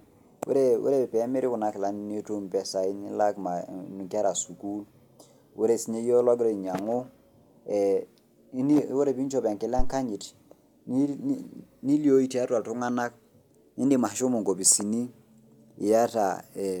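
At 9.79 s a deep, low thump cuts into the speech, peaking at about -11 dBFS and dying away within roughly 33 ms, with the whole disturbance over by 9.94 s. This is a phantom power thump: a supply on the live microphone input was switched while recording, and that sudden DC step passed through the coupling capacitors as a single pulse of low-frequency energy.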